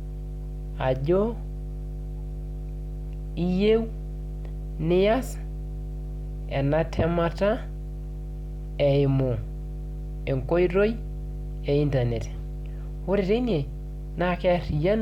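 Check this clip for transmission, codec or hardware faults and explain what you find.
One hardware fault runs through the whole speech clip. Mains hum, present from start to finish: a ground loop or nearby transformer is leaking the 50 Hz power line into the signal. It sits as a steady low drone with some low harmonics, roughly 10 dB beneath the speech.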